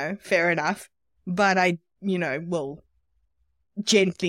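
A speech recording with nothing technically wrong with it.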